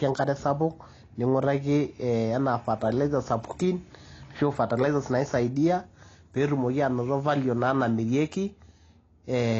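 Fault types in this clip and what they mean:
AAC compression: the speech was likely encoded as AAC-LC at a low bitrate, near 24 kbps, removing everything above 7.9 kHz and leaving plainly audible, dulled coding damage.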